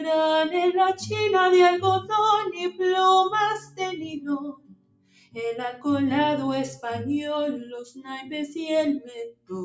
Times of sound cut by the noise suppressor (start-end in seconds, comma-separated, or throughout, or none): 2.51-2.81, 3.59-5.36, 7.82-8.56, 8.99-9.51